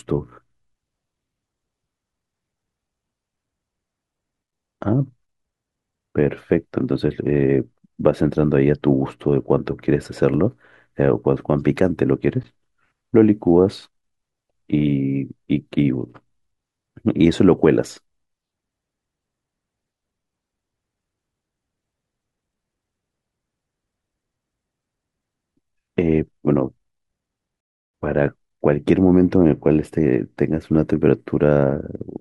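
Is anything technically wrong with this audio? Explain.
Yes. At 27.60 s there is a rebuffering stall lasting until 27.94 s. The player used up the audio it had downloaded and had to halt playback until more data arrived. The speech drops abruptly into silence for about a third of a second, 334.5 ms, then picks up at exactly the point where it broke off. No speech is skipped or repeated, but the pause stretches the timing, adding a gap that does not belong to the natural rhythm of the talking.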